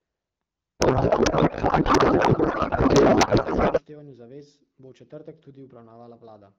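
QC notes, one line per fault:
0.80 to 3.82 s, codec payload misread: the speech turns into garbled noise and warble that barely follows it. The decoder seems to unpack AMR-WB bits in the wrong layout, which fits octet-aligned frames read as bandwidth-efficient.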